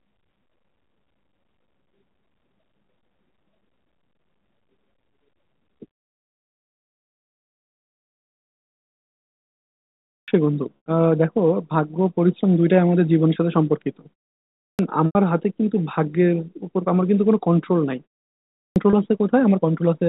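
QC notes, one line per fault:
10.02 s, 14.52 s, 18.49 s: clipped start after a pause. Each time the sound comes back out of silence, roughly the first 260 to 270 ms are gone, so it begins abruptly. The output device seems to drop into sleep during pauses as short as half a second and needs that long to wake.
10.77 to 10.86 s, 15.06 to 15.15 s, 18.90 to 18.93 s: packet loss with pitch repetition. The two 90 ms gaps, which fit three lost 30 ms packets, get a repeated pitch period fading out over about 50 ms, then brief silence and a cross-fade back. The 30 ms one just sounds like a slightly held buzz.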